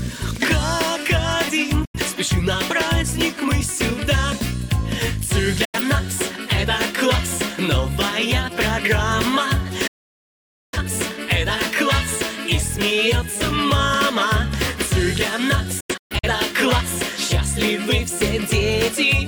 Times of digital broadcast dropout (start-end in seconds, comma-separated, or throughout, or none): 1.85-1.99, 5.65-5.80, 9.87-10.78, 15.80-16.28